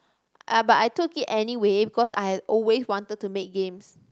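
At about 2.03 s there's a burst of packet loss: roughly 100 ms is concealed by stretching and fading the last sound, then the speech jumps ahead past a gap.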